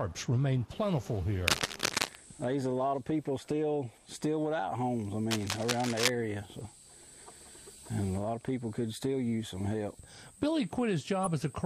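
From 1.48 to 2.16 s, and again from 5.31 to 6.10 s, a dense, uneven scratching and rustling runs over the sound, roughly as loud as the audio itself. This is cable scratch noise. It is likely caused by a worn cable, connector or control carrying a DC voltage being moved, so that its contact resistance jumped about rapidly and fed bursts of noise into the signal for the length of each disturbance.

At 11.24 to 11.27 s a brief, out-of-place burst cuts across the audio. This is a corrupt frame decoded. About one compressed frame had flipped bits, and the decoder played it anyway. Misread gains or codes put energy at the wrong frequencies for roughly that frame's length, which is why the disturbance is so short and sounds unrelated to the material around it.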